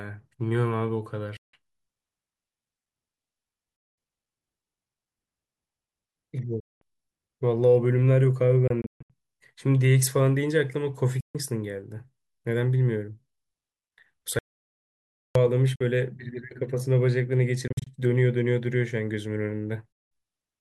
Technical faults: Bluetooth dropout; audio dropout to silence

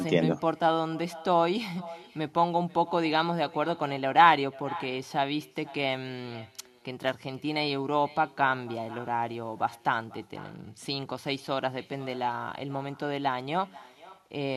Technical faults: echo with no canceller

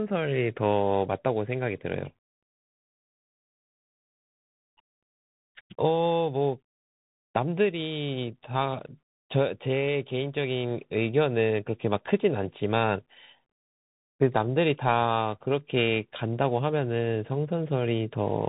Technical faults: Bluetooth CVSD headset codec

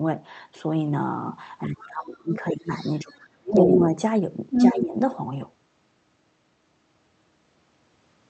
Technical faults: speech suppressed in double talk; other side's voice leaking through

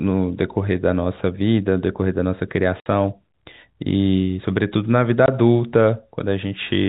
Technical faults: packet loss filled with silence

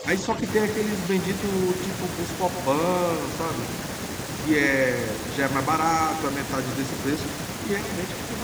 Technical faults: speech suppressed in double talk

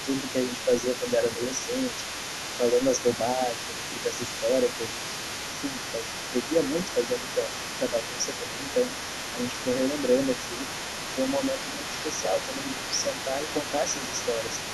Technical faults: other side's voice leaking through; speech suppressed in double talk

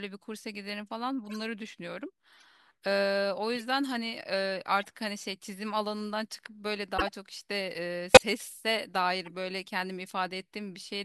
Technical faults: corrupt frame decoded

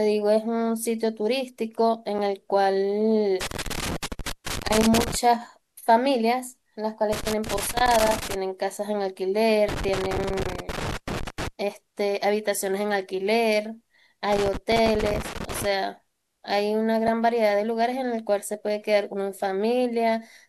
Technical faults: damaged data in a compressed stream; loose connector crackle

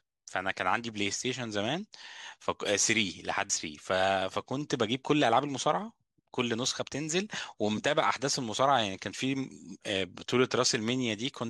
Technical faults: damaged data in a compressed stream

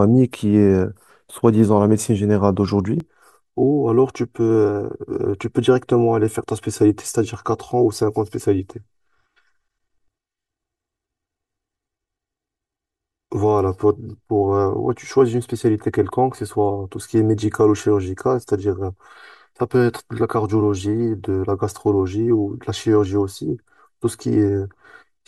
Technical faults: channel delay (comb filtering)

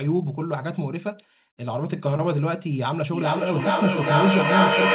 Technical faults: feedback echo between two devices

